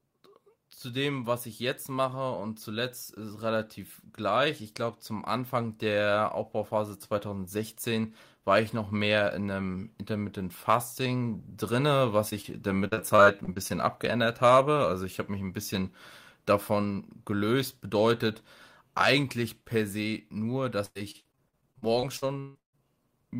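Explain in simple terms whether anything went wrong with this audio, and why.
Short concealed packet loss at 12.29 s and 12.41 s: tiny pieces of speech, about 20 ms each, arrived too late, so the receiver stretched the previous sound, causing brief smears.

Repeated packet loss (robotic sound) from 12.87 to 13.71 s and 20.85 to 22.80 s: pieces kept going missing, and the constant patching makes the speech choppy, worst in the second stretch.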